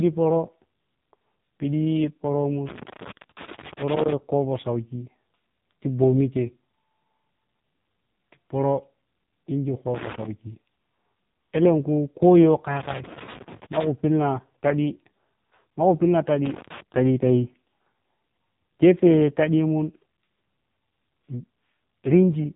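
Speech throughout the clip has passed through an AMR narrowband mobile codec, with nothing above 3.8 kHz and heavy damage: a buzzy, synthetic vocal-tract rendering of the voice from sparse pulse coding, which fits AMR-NB running at a low rate of about 5.9 kbps.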